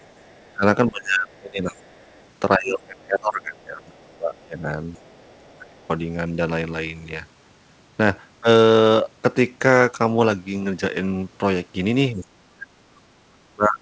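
This speech clip, carried over a call path whose lack of anything above 8 kHz fits G.722 coding, shows two faults. An echo canceller that likely left residual loudspeaker sound in the microphone signal produces the other side's voice leaking through: a faint second voice, around 35 to 40 dB below the talker, at 0.0–0.57 s, 1.32–2.27 s, 3.94–4.02 s and 4.95–5.81 s. The same canceller, likely unable to separate the talker from echo while both sides spoke, causes speech suppressed in double talk. The talker's voice dips sharply, by roughly 20 to 35 dB at its deepest, at 0.58–1.77 s, 2.57–4.72 s, 5.56–5.77 s and from 12.14 s to the end.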